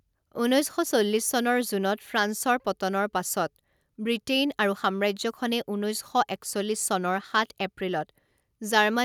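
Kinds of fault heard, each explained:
No technical faults heard.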